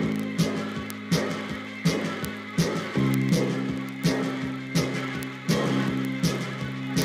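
A digital link feeding this audio is read by a receiver running on its own clock rather than locked to the sender's, with the two clocks differing by around 700 parts per million. The result is word clock ticks from 0.12 s to 7.02 s: every time the clocks slip past each other a single sample is dropped or repeated, producing sharp clicks of uneven strength roughly every 40 ms, some two hundred across the clip.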